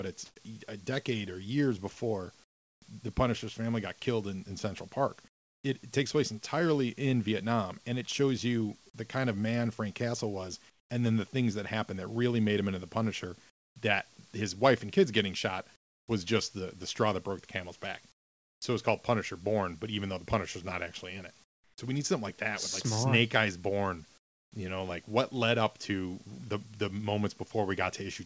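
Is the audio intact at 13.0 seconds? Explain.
No. Between 10.70 and 24.52 s, the sender likely stopped transmitting during pauses in speech, so the receiver filled those gaps with comfort noise in place of the background. About 1.96 s of real background in that span is replaced by a steady, featureless hiss that loses the detail of the actual room sound. The whole clip also has nothing above 8 kHz, which fits a wideband call codec.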